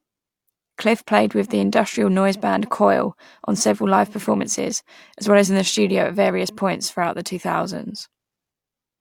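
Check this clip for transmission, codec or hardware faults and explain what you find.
No transmission, codec or hardware faults are audible anywhere in this speech recording.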